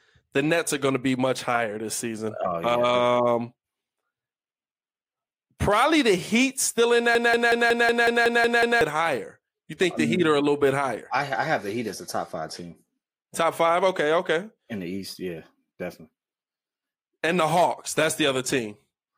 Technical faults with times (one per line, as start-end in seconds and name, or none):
7.15-8.81 broken-record loop